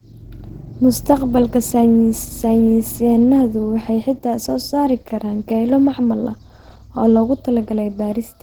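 Opus compression runs throughout the speech as a plainly audible hoarse, muffled graininess, with a rough, noisy top end that still reaches about 20.2 kHz. The likely cause is Opus's hybrid mode, which pairs a speech coder with noise-filled highs, at a rate fitting 16 kbps.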